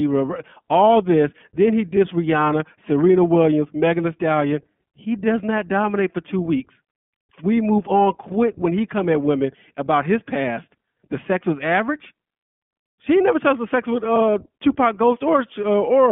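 The whole thing comes through the iLBC codec, and you can plainly hear it: speech squeezed into roughly 150 Hz to 3.4 kHz, with a slightly rough, synthetic edge. The 20 ms frame texture fits iLBC's 15.2 kbps mode, each frame coded independently.

Around 6.58 to 6.60 s there's a lost iLBC frame. The decoder papers over it by repeating the last pitch cycle blended with noise, so you get a brief buzzy, held-vowel blip, about 20 ms, likely a single dropped packet. The sound snaps back right away.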